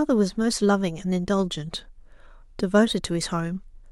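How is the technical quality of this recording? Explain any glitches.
A fine hiss and roughness run through the whole recording, riding on the speech rather than the gaps: it thickens on louder syllables and on sibilants and bright consonants, and falls away when the talker pauses. That behaviour points to sample clock jitter. The converter's clock wanders by around two microseconds, so each sample lands a little early or late. Where the waveform moves fastest, that timing slip becomes a larger amplitude error, sitting roughly 35 dB below the speech.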